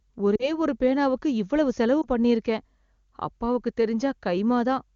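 Lost AMR speech frames hit this speech clip at 0.35 to 0.51 s, just before "ஒரு பேனாவுக்கு இவ்வளவு செலவு", and again at 2.02 to 2.07 s, right after that phrase. Corrupted frames failed their checksum, so the wideband decoder concealed them by repeating the last good pitch and vocal tract settings at falling gain. About 40 ms of concealment in the first event drops the voice to near silence within two frames, and 20 ms in the second produces a brief dip or warble, with the voice returning weak or rough for a moment.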